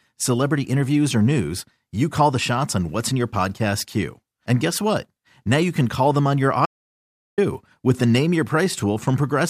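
An audio dropout to silence runs from 6.66 s to 7.38 s in this speech clip, a gap of about 720 ms where the sound stops abruptly mid-flow and resumes just as suddenly. The gap is silent, with no room tone or background left beneath it, so whatever was said in that stretch is lost. That points to the input signal having likely been cut, while the recording carried on writing silence.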